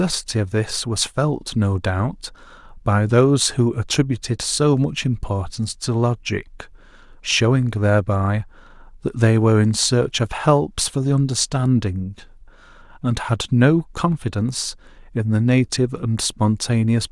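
Listening to this speech recording, nothing stood out as a technical problem at any point.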